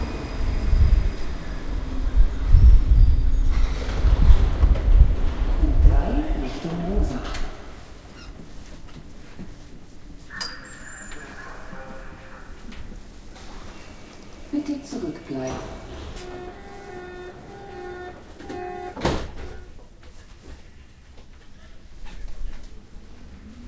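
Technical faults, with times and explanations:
No technical faults turn up here: the sounds come through a call connection as you'd expect, with the top end stopping at about 8 kHz in the way a wideband call codec like G.722 normally does.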